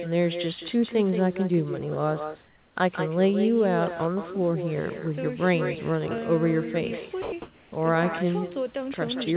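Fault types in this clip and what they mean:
Echo with no canceller: the far end's loudspeaker feeds its microphone, so every phrase returns roughly 0.2 s later, about 10 dB quieter and thinner, unlike reverberation.
Comfort noise in place of the background: at 2.46–2.76 s and 7.42–7.72 s the real background gives way to steady, featureless noise, about 3 dB quieter then about 5 dB louder, likely from discontinuous transmission.
Sound dropped by the voice detector: at 7.22–7.32 s, 100 ms of actual sound, not just background, is replaced by steady noise, likely because the detector misjudged it as silence.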